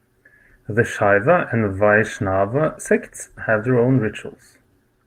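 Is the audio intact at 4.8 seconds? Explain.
Yes, the speech at 4.8 seconds plays through cleanly, with no dropout, click, distortion or other fault at that moment.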